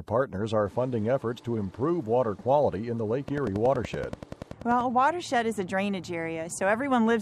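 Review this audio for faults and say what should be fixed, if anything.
A train of clicks runs from 3.28 s to 4.82 s: around fifteen near-identical pulses at a regular 10.5 per second, peaking roughly 5 dB above the surrounding sound and heard as steady ticking laid over the audio. Unlike random vinyl-style crackle or a single dropout pop, these repeat with the same shape at an even pace, which points to a periodic source, likely interference from nearby equipment or a faulty connection or power supply. To prevent it, keep the recording chain away from switching power supplies and radios, and use a stable, well-grounded interface.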